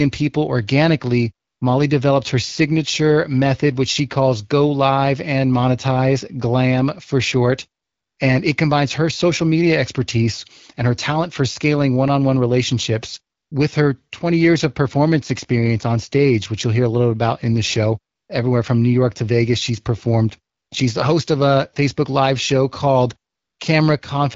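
AMR comfort noise appears at 1.47 to 1.61 s, 7.83 to 8.17 s after "for short", 13.37 to 13.51 s between "one on one relationships" and "with her", 18.15 to 18.29 s, 20.55 to 20.71 s after "she's performed", and 23.33 to 23.59 s. Each gap lasts 140 to 340 ms. The phone judged the talker silent and stopped sending speech frames. The receiver then filled each pause with synthetic noise. The real background gives way to a smooth, steady hiss that switches in and out.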